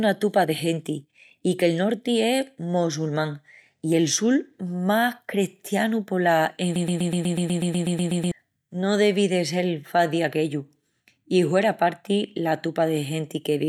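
At 6.76 s the speech catches and stutters: a fragment of about 0.12 s plays 13 times back to back, a mechanical chattering that runs until 8.32 s before normal speech resumes, and whatever should have been said in that stretch of roughly 1.6 s is missing. This is a broken-record loop, likely caused by the player, encoder or stream stalling and re-sending the last short buffer it held until data arrived again.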